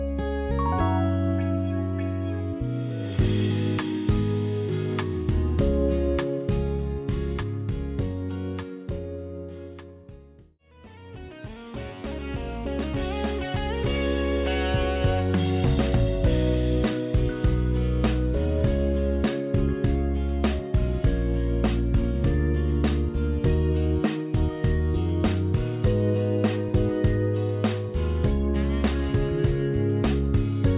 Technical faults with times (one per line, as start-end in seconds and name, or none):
none